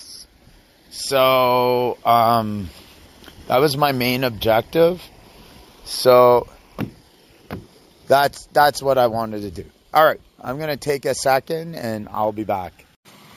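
Imaging from sample-and-hold upsampling runs throughout. Samples were repeated without a smoothing filter, which fits a rise from 16 kHz to 48 kHz. A mirrored copy fills 8 kHz to 16 kHz, about 19 dB down. It adds a bright metallic fizz that follows the sound's level.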